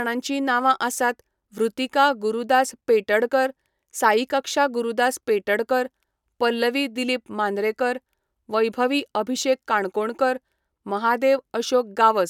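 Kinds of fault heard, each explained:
Nothing stood out on listening to this speech recording.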